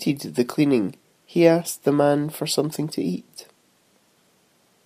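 No technical faults are audible anywhere in the speech.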